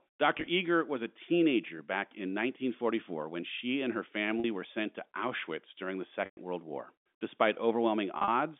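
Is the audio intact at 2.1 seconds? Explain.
No. Right after "was a teenager", from 2.09 to 2.11 s, there is packet loss with pitch repetition. About 20 ms of audio went missing, which fits two lost packets. The receiver filled the gap by repeating the last pitch period, so the sound briefly holds with a slight buzz.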